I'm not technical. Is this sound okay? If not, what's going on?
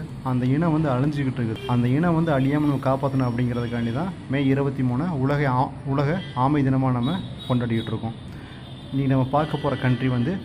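No. At 1.56 s there is a brief chirp or blip that cuts into the sound. This is damaged data in a compressed stream: a bit of the file got corrupted, so the player briefly misreads it and has to find its place again.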